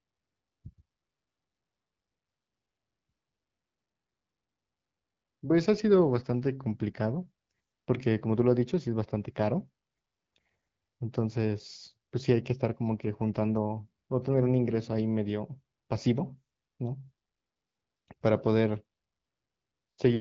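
No technical faults are audible anywhere in this recording.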